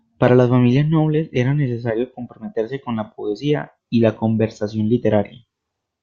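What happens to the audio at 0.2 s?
Nothing goes wrong at 0.2 s; the speech carries on intact through that moment, with no fault to be heard.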